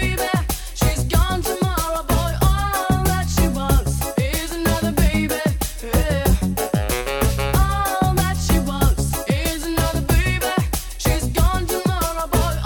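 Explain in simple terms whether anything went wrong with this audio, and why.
Nothing went wrong here, because no technical problem can be heard anywhere in the recording. There is simply no moment that stands out as a fault to explain.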